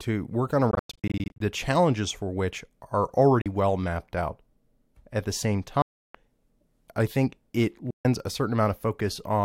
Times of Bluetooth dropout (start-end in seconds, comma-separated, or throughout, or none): 0.71-1.40, 3.41-3.46, 5.82-6.15, 7.90-8.05